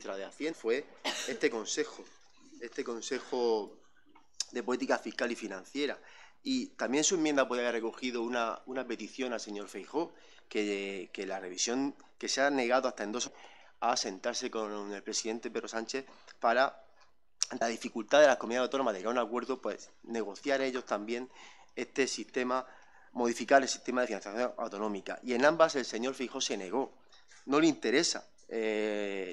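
Damaged data in a compressed stream at 0.51–0.53 s, 13.26 s and 17.60 s: corrupted bytes made the decoder lose frame sync, producing brief glitches.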